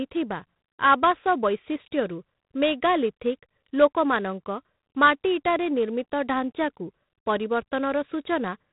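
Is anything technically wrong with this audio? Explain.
Yes. Throughout the speech, a harsh, rasping hiss rides on the signal and rises and falls with its level, and everything above about 3.9 kHz is gone, leaving a narrow, telephone-like sound. This is G.726 ADPCM coding at a low rate, with a roughness that fits 24 kbit/s. Each sample keeps only a few bits describing how far the signal strays from an adaptive prediction, so the coarse steps leave quantisation noise that tracks the speech.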